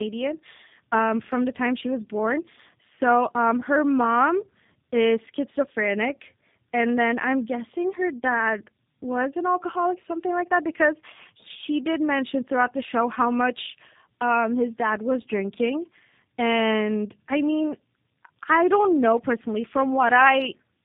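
From start to finish the speech carries tandem speech coding: it sounds like two low-rate speech codecs in a row, likely an AMR-type coder feeding a G.729-style one. Each re-encodes the last one's damage, so the speech comes out rough, warbly and muffled, with nothing above 3.8 kHz.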